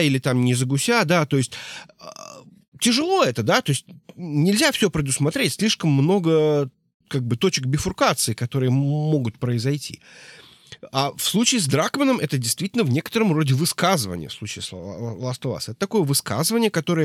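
No technical faults can be heard anywhere in the recording.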